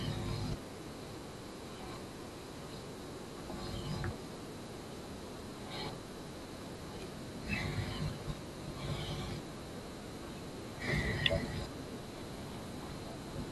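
No technical faults are audible anywhere in the speech recording.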